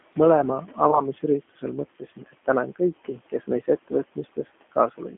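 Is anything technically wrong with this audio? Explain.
Yes. Several faults run through this speech clip, and some hit specific moments.

Low bit depth with dither affects the whole clip. The audio sounds like it is stored in about 6 bits. Dither was added before rounding, so the rounding error turns into steady white noise instead of distortion. The result is an even, constant hiss. It sits only around 20 dB below the speech. The room noise, about 23 dB down, is part of the recording and sits below it.

The G.729 codec also affects the whole clip. The sound fits an 8 kbit/s G.729A stream. The codec rebuilds speech from a vocal tract model, a pitch predictor and a few pulses per frame. It does not send the waveform itself. The band runs only from 250 Hz to 3.4 kHz, so the sound is thin and muffled. The codec damage is plainly audible. The speech has a rough, synthetic edge.

Speech cut by the noise suppressor occurs six times. 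The spans are 0.68 to 0.78 s, 1.49 to 1.63 s, 1.88 to 2.48 s, 3.05 to 3.48 s, 3.66 to 3.92 s and 4.12 to 4.56 s. Each time, the suppressor treats part of the speech as noise and turns it down. The drops reach 13 to 16 dB. Those stretches sound swallowed or faint.

VoIP packet loss concealed by the speech codec occurs from 0.91 to 1.07 s. It sounds like a single lost 20 ms packet. The decoder fills the gap by extending its last pitch and filter, and the gain falls frame by frame. You hear the sound stretched into a short buzzy tone or coloured noise that fades. Each frame builds on the previous one, so the voice stays weak or distorted past the gap itself, until about 1.07 s.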